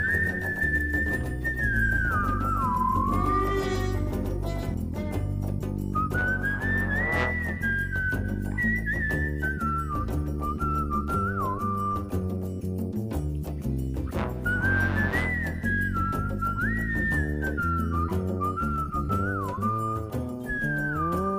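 Until 4.74 s, a doubled audio track: a full-band copy, likely from a slower second path or an edit, trails about 150 ms behind at roughly 5 dB down. Unlike echo, it has no decay or room colour, and it cuts off abruptly.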